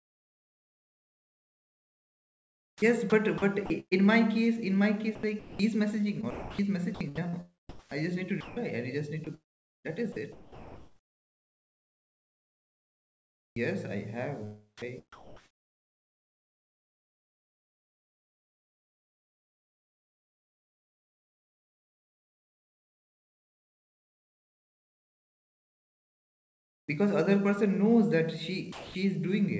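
Sound chopped by the voice detector affects this speech clip from 0.0 to 3.93 s, 5.15 to 5.59 s, 6.21 to 8.57 s, 9.25 to 13.56 s and 14.78 to 26.88 s, ending just before "because other person knows". The sending side's voice detector likely kept toggling, swapping about 3.0 s, 0.28 s, 0.79 s, 3.8 s and 11.8 s of real sound for comfort noise, so the speech breaks up. Sound dropped by the voice detector follows at 28.72 to 28.94 s, right after "other person knows that": the detector likely judged those 220 ms to be background and stopped sending, and steady comfort noise fills the gap until transmission resumes. The G.722 call path at 64 kbps leaves nothing above 8 kHz.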